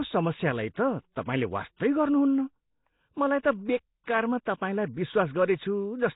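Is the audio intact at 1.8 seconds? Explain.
No. From 1.77 to 1.80 s a brief hiss smears in ahead of the attack, softening it. This is pre-echo: the codec's block spreads quantisation noise into the quiet moment before the onset. The whole clip, including this moment, also sounds rough, hissy and underwater, with nothing above 3.8 kHz, likely from heavy Nellymoser compression, which leaves weak bands noise-filled.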